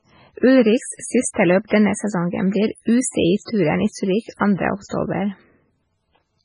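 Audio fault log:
Throughout: MP3 compression, likely. Nothing sounds above 10.5 kHz. The encoder had too few bits, which fits a very low bitrate near 16 kbps. Weak frequency lines drop in and out between frames. So the speech sounds watery and swirly, with metallic chirps on s sounds.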